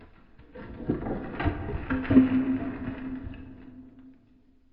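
No audible faults appear anywhere in this audio.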